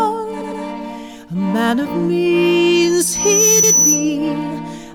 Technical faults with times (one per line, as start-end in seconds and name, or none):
0.40-0.62 repeated frames
2.75-4.16 loudspeaker feedback squeal
3.63-3.73 repeated frames